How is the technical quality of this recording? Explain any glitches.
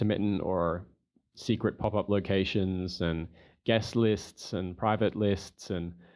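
No technical glitches can be heard in this speech recording.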